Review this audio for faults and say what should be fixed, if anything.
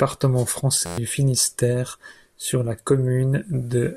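A system hang loop runs from 0.86 to 0.98 s. A segment of about 11.6 ms repeats exactly, ten times over. This produces a steady buzz at 86.1 Hz. The loop length fits a 512-sample buffer. The host or driver stalled while the hardware kept replaying its ring buffer. About a tenth of a second of speech is lost. To prevent it, keep the audio thread unblocked, and have the driver output silence on underrun.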